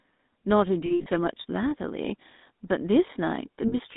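From start to end the speech carries the GSM full-rate codec sound, which fits a 13 kbps full-rate GSM link. The band is held to roughly 200 Hz to 3.7 kHz, so the top end is gone. The codec rebuilds the voice from a vocal-tract filter driven by a sparse, regularly spaced pulse excitation, and that coarse excitation is plainly audible as a buzzy, gravelly roughness over everything.

Between 0.86 and 1.07 s there are lost GSM frames: 160 ms of audio missing, scattered across about 200 ms, with the longest gap around 70 ms. The pattern points to about eight lost 20 ms frames. The decoder covers each gap by reusing the last good frame's parameters, so the sound stalls into a rough, metallic ring instead of moving on. A second, shorter loss of 40 ms at 3.68 to 3.75 s gives the same brief metallic hold.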